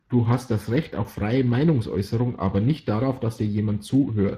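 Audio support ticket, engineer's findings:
Speex codec damage, whole clip. Speech hoarse and noisy, plainly audible. Starved CELP excitation, at 22.4 kbps. Spectrogram: smeared harmonics, shaped noise-like fill above 8 kHz, hard ceiling at 15.4 kHz.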